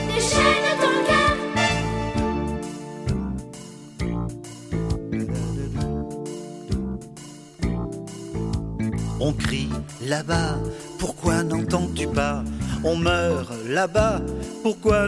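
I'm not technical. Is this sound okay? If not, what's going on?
Yes, it's fine; nothing here needs fixing.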